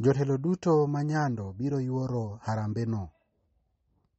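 Throughout, the speech is dull with nothing above 8.4 kHz, and weak detail swirls on and off, likely MP3 compression at a low bitrate near 32 kbps, unlike a plain low-pass filter.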